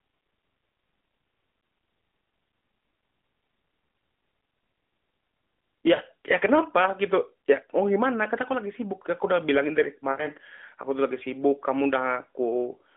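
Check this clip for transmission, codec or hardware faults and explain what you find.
Two short dropouts come from lost AMR speech frames, heard through a narrowband mobile channel whose band runs roughly 200 Hz to 3.5 kHz, with the slight coarseness of the AMR-NB codec at a rate that fits its 12.2 kbps mode.

At 5.96 to 6.02 s and 10.12 to 10.27 s, the sound smears into a drawn-out, fading buzz, then returns briefly weak and rough. Radio errors corrupted the frames, so the decoder repeated its last good settings at falling gain. The gaps, 40 ms and 60 ms long, fit two and three lost 20 ms frames.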